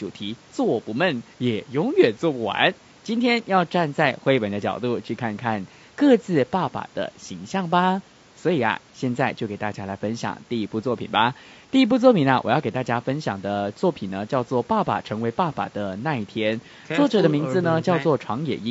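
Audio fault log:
Throughout: low-delay AAC compression, plainly audible across the speech, which sounds rough and grainy, with noise filling the gaps between pitch harmonics and a thin, somewhat synthetic top band. The likely cause is AAC-ELD, whose frames of roughly 10 ms resolve harmonics too coarsely at a rate that fits around 32 kbps.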